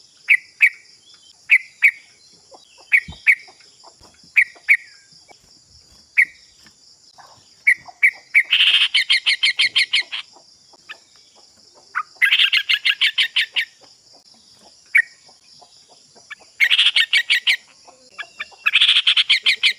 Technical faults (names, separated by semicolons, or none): none